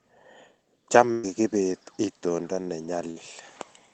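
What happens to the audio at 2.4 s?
Nothing goes wrong at 2.4 s; the speech there plays through intact, with no dropout, click, glitch or other fault.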